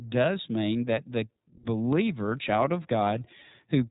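A speech recording that carries iLBC codec damage from start to finish, plainly audible as a slightly rough, synthetic edge on the voice. Nothing passes above 3.8 kHz, so a spectrogram shows a hard ceiling with empty space above it. Each 30 ms frame's excitation is coded independently, which fits the codec's 13.33 kbps mode.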